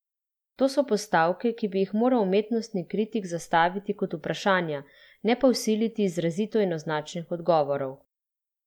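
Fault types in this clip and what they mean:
Nothing stood out as a fault on listening to this speech recording.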